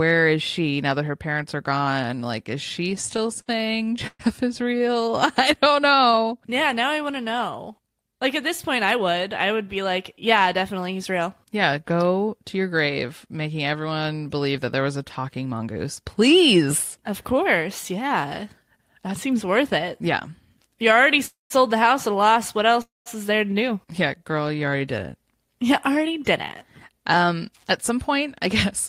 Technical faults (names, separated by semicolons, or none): repeated stalls (stutter); jitter buffer slow-down; jitter buffer speed-up; scattered short gaps; call audio freeze